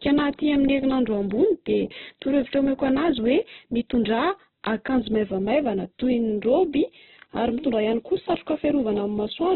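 It's a speech clip, narrowband and grainy throughout, with nothing above 4.1 kHz, which fits likely Opus compression at a starved bitrate around 8 kbps.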